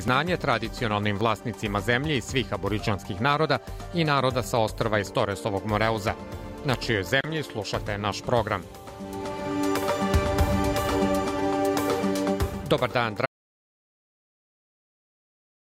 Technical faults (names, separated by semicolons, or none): audio dropout to silence